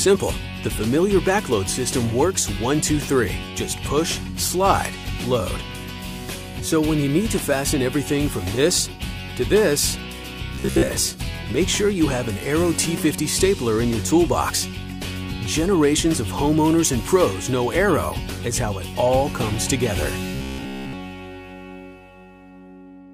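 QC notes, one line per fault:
10.55–10.88 s and 20.35–20.93 s, robotic sound from repeated short buffers: the sound turns into a rigid, metallic buzz at a fixed 66.7 Hz. That rate means a 15 ms slice is looping, likely because fresh audio arrived too late and the last chunk was replayed in place of the skipped material. Most of the first stretch and all of the second are affected. Unlike mains hum, the buzz still follows the sound's rough shape and stops cleanly when each stretch ends.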